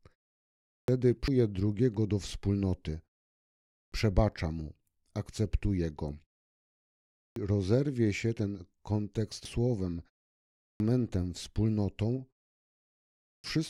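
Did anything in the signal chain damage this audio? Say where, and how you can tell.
Yes. The playback stage shows a clipped start after a pause five times: at 0.51, 3.52, 6.97, 10.42 and 13.02 s. Each time the speech comes back out of a silence of 0.41 to 0.79 s with its opening missing. Between 0.37 and 0.42 s of sound is lost, and the onset lands abruptly. The output device or its driver is going idle during the pause and takes that long to wake and lock again.

The codec or storage stage has damaged data in a compressed stream at 1.28 s and at 9.45 s. Each one is a brief chirp or blip that has nothing to do with the speech around it. Some bytes in the compressed file were lost or corrupted at those points. The decoder misread the frames there, lost sync and recovered at the next valid frame header.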